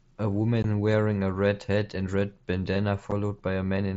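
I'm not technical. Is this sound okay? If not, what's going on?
No. There is unconcealed Bluetooth headset packet loss: tiny chunks of sound travelling wirelessly from the headset to the phone went missing, and nothing was done to cover the gaps. You hear this as two brief dropouts in the speech, one at about 0.63 s lasting 15 ms and one at about 3.11 s lasting 7.5 ms. Each is a sudden hole with sharp edges, so it can come across as a small click or tick rather than a clear pause. The headset's wideband mSBC link carries the speech at its usual slightly grainy quality around these gaps.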